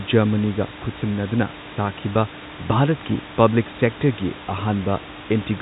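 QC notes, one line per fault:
The speech arrives through G.711 A-law telephone coding at 64 kbps, band-limited to nothing above about 3.8 kHz, with room noise sitting about 14 dB below the speech.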